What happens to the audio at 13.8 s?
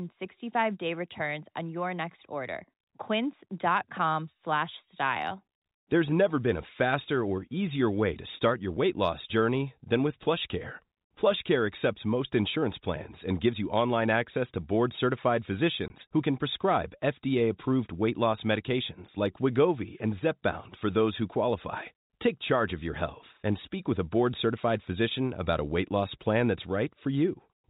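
Nothing goes wrong at 13.8 s: the speech continues intact through that moment, still carried by the G.711 telephone coding, which leaves it band-limited below 4 kHz.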